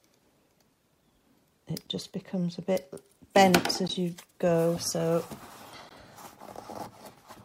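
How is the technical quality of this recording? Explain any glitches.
The recording has two kinds of technical fault: short dropouts at regular joins and one isolated digital tick.

Gaps at a join of encoded pieces occur at 1.87 s (about 9 ms), 3.88 s and 5.89 s (16 ms each), spaced 2.0 s apart. Separately encoded segments were joined with their encoder delay and end padding left in, so brief silences open in the sound, their edges smeared by the codec. A waveform shows flat notches, and a spectrogram shows thin vertical blank stripes.

A bit error spike at 6.85 s spans two samples. A flipped bit makes the value jump by a power of two and return, producing one sharp tick unrelated to the surrounding sound. It appears as a lone needle on the waveform and a full-band vertical line on the spectrogram.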